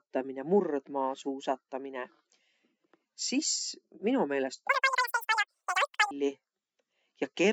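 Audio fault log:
4.69–6.11 s, wrong sample rate: the samples are played back far faster than they were captured, with no conversion between the two rates. This fits 16 kHz material read out at 44.1 kHz. Speed rises about 2.76 times and pitch jumps about 17.6 semitones, so the speech turns chipmunk-high and rushed.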